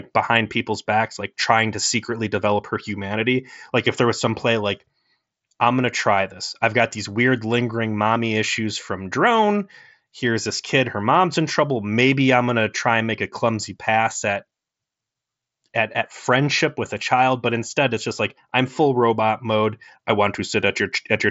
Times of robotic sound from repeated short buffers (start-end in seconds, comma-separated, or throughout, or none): none